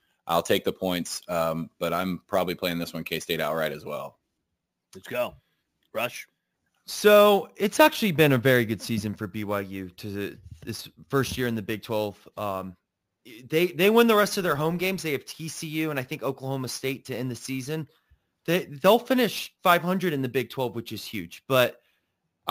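From start to finish the speech carries imaging from sample-and-hold upsampling. The audio seems to have been raised from a 16 kHz rate to 44.1 kHz by repeating each sample, with no smoothing filter afterwards. Mirror copies of the spectrum result. The first sits between 8 and 16 kHz, about 18 dB below the signal. It sounds like a bright, metallic fizz that rises and falls with the speech. That top band moves opposite to the pitch.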